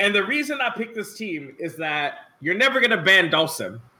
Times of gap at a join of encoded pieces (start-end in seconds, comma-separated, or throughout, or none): none